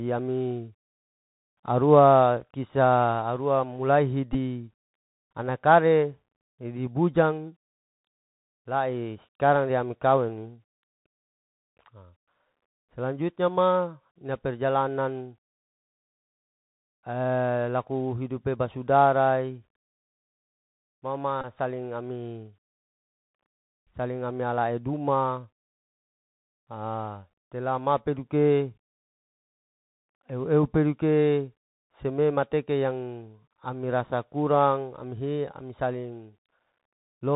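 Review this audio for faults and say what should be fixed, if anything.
The whole clip sounds boxy and narrow, with nothing above 4 kHz, scratchy s sounds and a granular hiss under the speech. This is the Bluetooth CVSD headset codec, which fits a 64 kbps link coding one up-or-down bit per sample with an adaptive step that loud high sounds outrun. Using a wideband headset profile (mSBC or better), or a wired microphone, prevents it.

Two short buzzy bursts near 267 Hz sit at 4.33 to 4.37 s and at 21.41 to 21.45 s, just before "saling ami". These are Bluetooth headset packets repeated. Lost voice packets were replaced by the last packet decoded again every 3.75 ms, with about 15 ms and 22.5 ms lost. Keeping the headset close to the phone, away from Wi-Fi interference, prevents it.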